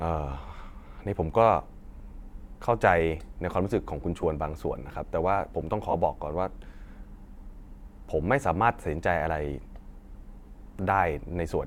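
Lost LE Audio frames at 4.21 s (15 ms) and 5.91–5.94 s (30 ms): the decoder repeated the last spectrum with scrambled signs, smearing the speech into brief noise.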